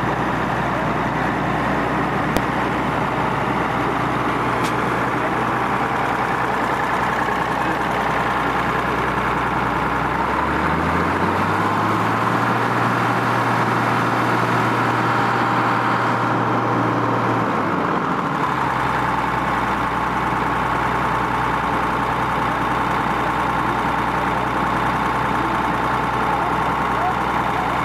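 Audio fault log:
2.37 s, invalid numbers at full scale: a calculation produced infinite or invalid values that were forced to one extreme, so the output holds flat at a single value far beyond the audio's peaks for about 0.73 ms, which fits a 32-sample block. At that length it is heard as one sharp bang. On the waveform it appears as a thin rectangular spike towering over the surrounding signal. On the spectrogram it is a narrow vertical stripe spanning all frequencies.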